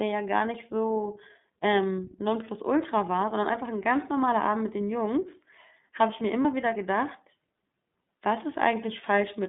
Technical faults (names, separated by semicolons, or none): iLBC codec; lost iLBC frames